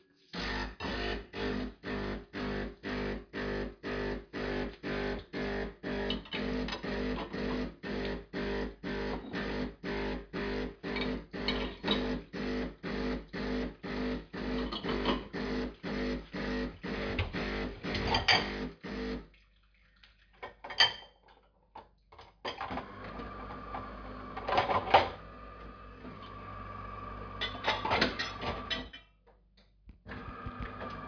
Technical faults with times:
none

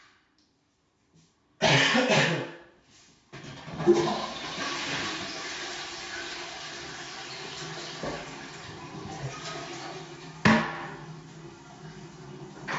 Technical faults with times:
none

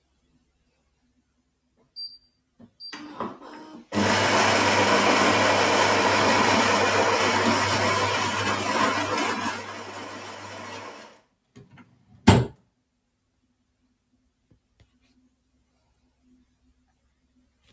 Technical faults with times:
0.00-17.72 noise suppressor applied to music or sounds
0.02-1.91 sound cut by the noise suppressor
2.19-2.76 sound cut by the noise suppressor
8.30-17.72 sound cut by the noise suppressor

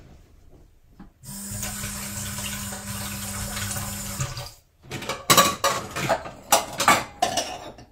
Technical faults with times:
2.72-2.86 AAC frame loss with concealment
5.73-5.79 AAC frame loss with concealment

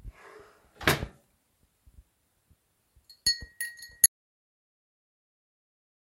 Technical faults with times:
4.06-6.13 audio dropout to silence

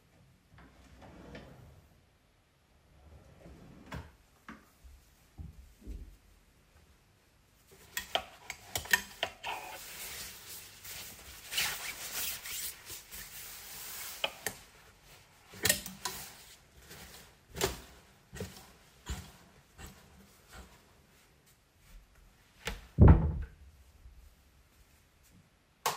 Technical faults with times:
1.56-1.73 DAB burbling
14.01-14.16 DAB burbling
18.59-18.89 DAB burbling

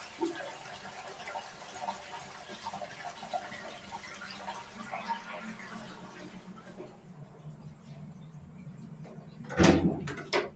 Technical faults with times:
0.00-10.56 noise suppressor applied to music or sounds

